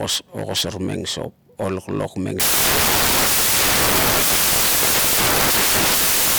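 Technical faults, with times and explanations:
2.40–6.38 s, samples built from the wrong bytes: loud, harsh broadband noise swamps the speech to the end, as misassembled bytes turn low bits into large values.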